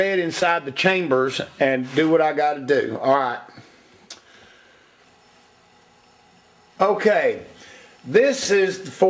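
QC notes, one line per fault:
0.40–0.43 s, short concealed packet loss: about 20 ms of audio arrived too late, so the decoder stretched the preceding sound across the gap, leaving a brief smear.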